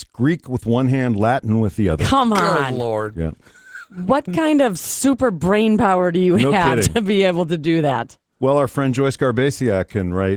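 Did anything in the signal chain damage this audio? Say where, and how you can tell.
Yes. The damage happens at the codec stage and runs through the whole speech clip as Opus voice compression. The speech sounds hoarse and faintly robotic, which fits Opus in hybrid mode at a low bitrate around 16 kbps with 20 ms frames. The lower band is coded with linear prediction and a coarse excitation, and the band above 8 kHz is filled by a thin CELT layer. On a spectrogram, the content above 8 kHz looks smeared and patchy, and harmonics below it look blurred.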